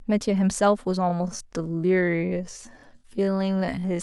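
Speech, with a time-stretched section running from 1.03 s to the end of the clip. At that point the pace drops abruptly to about 0.56 times the original speed while the pitch stays where it was, and the slowed speech drags. That combination likely comes from software lengthening the passage to fill a set duration, preserving pitch by repeating short overlapping fragments of the waveform.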